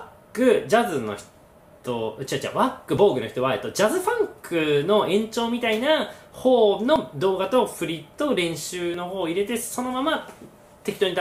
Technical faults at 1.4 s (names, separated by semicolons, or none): none